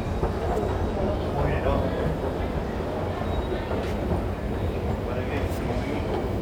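A recording of everyday sounds, with no technical faults to report. Nothing in it calls for a time or a cause.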